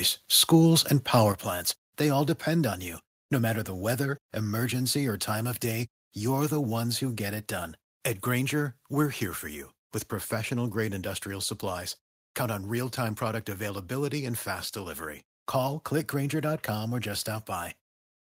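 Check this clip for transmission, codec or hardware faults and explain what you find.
There's one fault: a microphone volume stepped down at 1.32 s, right before "plants they all depend". The speech and the room sound behind it both drop by about 6 dB in a single step and stay there. The likely cause is the call software deciding the mic input was running too hot and cutting the device's input volume in one go, rather than easing it down, so you hear an abrupt level change instead of a smooth fade.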